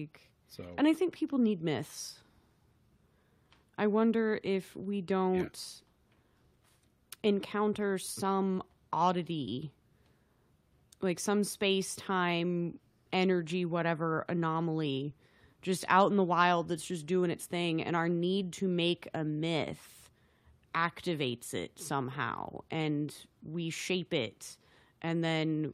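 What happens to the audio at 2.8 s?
Nothing goes wrong at 2.8 s: the speech plays through that moment intact, with no dropout, glitch or other fault.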